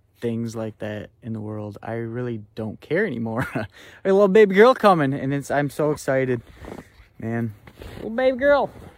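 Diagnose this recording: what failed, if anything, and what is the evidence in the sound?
Nothing failed: no stage in the chain leaves any audible evidence of a problem anywhere in the recording.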